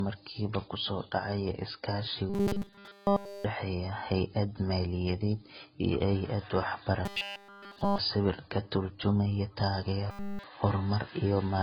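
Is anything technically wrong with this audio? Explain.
Yes, the speech carries two faults: a layered codec sound throughout and three bursts of robotic buzz.

Transcoding between lossy codecs runs across the whole clip. The top of the spectrum is cut off, and the smeared, swirly artefacts of one encoder sit under a second layer of different artefacts. This most likely comes from a very low-rate AAC-style first encode that was then re-encoded to Vorbis. The second codec spent its bits reproducing the first one's damage, and the first one's bandwidth limit stayed. A spectrogram shows a hard ceiling at the bandwidth limit with blotchy, patchy texture below it.

Robotic sound from repeated short buffers occurs at 2.30 to 3.45 s, between "ku soo dhacaya iskaashi" and "dhexeeya hay’ad maaliyadeed iyo", at 7.05 to 7.98 s, just after "hay’ad maaliyadeed iyo hay’ad", and at 10.11 to 10.44 s. In each stretch essentially all of the audio is a repeat. 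The likely cause is late-arriving data filled in by looping a fragment of about 5 ms, which imposes a rigid, metallic 200 Hz buzz. On a spectrogram this appears as evenly spaced horizontal lines at multiples of 200 Hz. On the waveform it appears as an identical cycle repeating every 5 ms.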